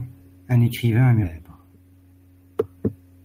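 At 1.23 to 1.25 s the speech lurches forward with no gap: the sound on either side of the cut is joined directly. This is a skip ahead. Around 0.7 seconds of audio was dropped, either in transit or by an overflowing jitter buffer, because later audio was already queued.

From 1.33 to 2.20 s the speech sounds hurried and runs about 15% fast while keeping its normal pitch. This is a jitter buffer speed-up. The buffer held more audio than its target, so the receiver repeatedly trimmed short pitch-period pieces, about 150 ms in total, to shrink the delay.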